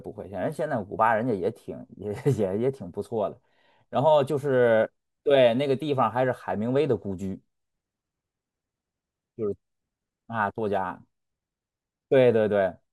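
No technical faults are audible anywhere in this speech recording.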